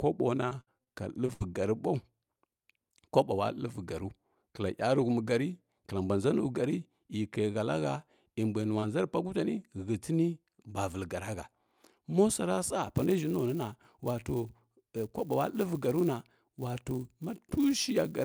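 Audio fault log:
0.43 to 1.42 s, repeated packet loss (robotic sound). The audio breaks up six times in under a second. About 200 ms of sound goes missing, and the longest hole is 65 ms. Each hole is patched by stretching the last sound forward, so about a fifth of this stretch is concealment. Around 70 ms is only roughly rebuilt. Holes arrive one soon after another. The result is choppy, with pieces dropped out.
8.80 to 8.84 s, short concealed packet loss. This comes just after "e mbui". About 20 ms of audio arrived too late to be decoded. The receiver filled the hole by carrying the preceding sound forward, using its pitch where it was voiced and shaped noise where it was not. It then blended back into the real signal. The result is a brief smear or wobble at that point.
8.82 to 8.84 s, 9.60 to 9.62 s and 9.84 to 9.86 s, lost packet rebuilt from error correction. A 20 ms packet went missing each time. 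The packet after it carried a low-bitrate backup copy, and the decoder played that copy. So there is no audible gap. Each rebuilt frame sounds rougher and noisier than its neighbours because the backup is coarse. The first one overlaps the tail of the concealed loss.
12.83 s to the end, filter restarted on every block. A filter in the chain loses its memory at every block boundary and starts again from silence. Each block therefore opens with a small transient. These repeat as a buzz at 200 Hz, which points to blocks about 5 ms long. The buzz rides on the signal, getting louder as the sound gets louder and fading when it drops.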